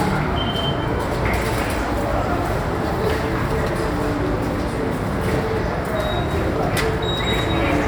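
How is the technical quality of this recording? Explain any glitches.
No glitches or technical faults can be heard here.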